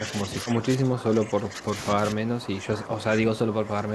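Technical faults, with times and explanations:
0.00–1.74 s and 1.92–3.94 s, speech suppressed in double talk: the voice keeps sagging by up to about 10 dB. Likely the echo canceller heard both sides talking at once, couldn't pull them apart, and ducked everything.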